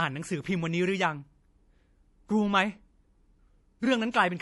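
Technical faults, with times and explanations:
Throughout, MP3 compression: nothing above about 11.4 kHz and plainly audible watery swirl on the speech, unlike simple low-pass filtering; likely a low bitrate near 48 kbps.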